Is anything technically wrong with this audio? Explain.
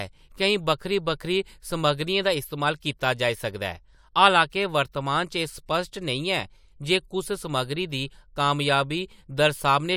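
No, nothing is technically wrong with this audio.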